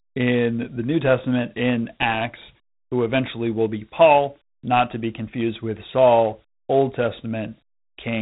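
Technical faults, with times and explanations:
Throughout, Dialogic VOX ADPCM: the speech carries a gritty, granular hiss that tracks the sound and rises and falls with it, and nothing is heard above about 3.9 kHz, giving a dull, telephone-like band. Each sample is stored as a coarse 4-bit step from a prediction, so the error is plainly audible as grit riding on the signal. The band edge and the damage fit 32 kbps Dialogic (OKI) ADPCM at 8,000 samples a second.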